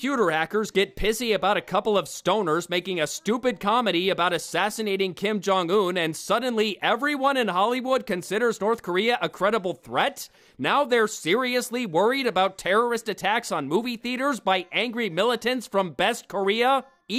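No technical faults are audible.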